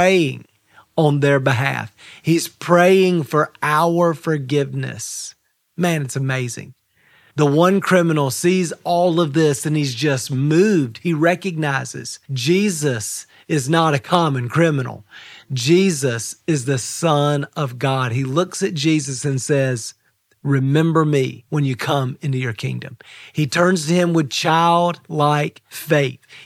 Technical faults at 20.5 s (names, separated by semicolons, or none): none